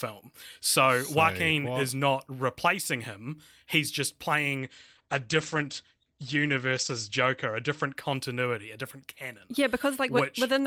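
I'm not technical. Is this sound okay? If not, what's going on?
No. From 4.58 to 8.47 s, just after "replacing him he's just" and ending before "a different canon", there is a call bitrate drop. The call judged its connection had worsened and told the voice compressor to send far less data. The compressor then describes the speech much more crudely and throws away the crisp high end, so the voice turns muffled and watery. It is at its worst for about 2.3 seconds before clearing.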